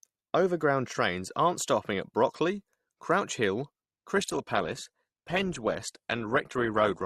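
At 4.16 s the speech switches abruptly, with no gap, to an adaptive stream at a lower bitrate that lasts to the end. The treble thins, consistent with a drop from roughly 64 to 16 kbit/s Opus. On a spectrogram, everything above 12.2 kHz vanishes sharply at that moment.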